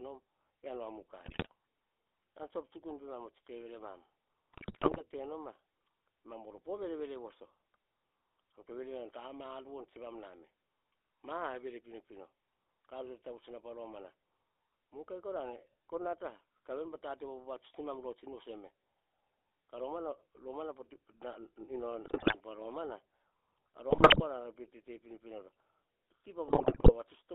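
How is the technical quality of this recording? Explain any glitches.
The quality is poor: the whole clip went through a GSM full-rate codec, and the speech breaks up in five places from GSM bit errors.

GSM full-rate codec, throughout: the codec rebuilds speech from a vocal-tract model driven by sparse pulses, within a 300 Hz to 3.6 kHz band. The result sounds buzzy, gravelly and muffled.

GSM bit errors, at 1.26–1.47 s, 4.53–5.03 s (just before "te no ma"), 22.04–22.36 s, 23.90–24.22 s and 26.48–26.92 s: corrupted decoder parameters warp the spectrum or the level. The speech squawks, pops and gargles.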